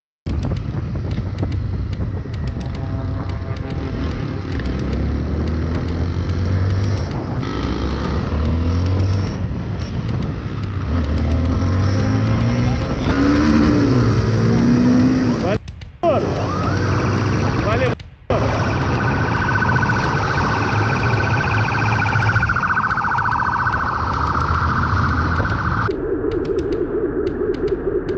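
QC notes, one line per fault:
Nothing stood out on listening, beyond the narrowed top end expected of audio carried over a call link.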